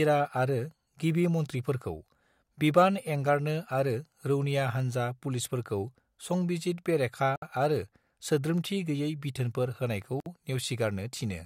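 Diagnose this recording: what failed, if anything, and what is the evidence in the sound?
The codec stage has a gap at a join of encoded pieces: about 63 ms at 7.36 s, just before "आरो सोद्रोमथि गोयै बिथोनफोर", and about 58 ms at 10.20 s, right after "सोद्रोमथि गोयै बिथोनफोर होनायखौ". The pieces were encoded separately and then joined without trimming, so encoder delay and last-frame padding were left in.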